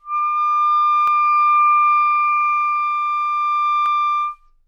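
A short recording of sounds with two sharp, isolated clicks, at 1.07 s and 3.86 s. Each is a thin tick with nothing audibly missing around it, most likely dropped samples, with just a handful lost so the waveform jumps straight to a later value.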